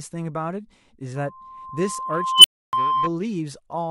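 Loudspeaker feedback squeal runs from 1.15 to 3.10 s. A microphone picks up its own loudspeaker, and at 1 kHz the loop gain passes unity, so a steady tone swells over roughly a second and a half until it sits about 5 dB above the speech.

An unstable filter fault starts at 2.34 s, inside that squeal. A recursive filter with bad coefficients lets a tone near 3 kHz grow violently in 99 ms until it clips and overflows. The output then drops to silence for 0.29 s, ending at 2.73 s.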